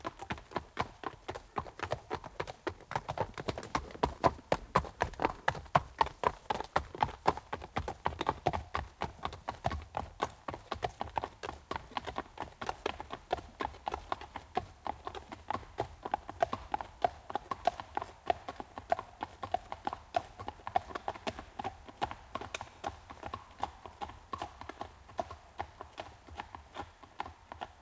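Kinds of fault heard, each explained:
Nothing stood out on listening to this recording of everyday sounds, which arrives through the call path with its upper range ending around 8 kHz.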